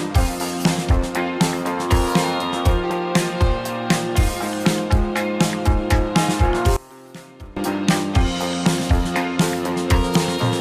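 From 6.77 to 7.57 s the sound suddenly drops by about 21 dB, as if its centre has been scooped away, leaving a faint remnant before full level returns. The likely cause is one channel inverted: with one stereo side flipped in polarity, whatever the two channels share cancels when they are combined to mono, so only the small difference between them survives during those 0.8 seconds.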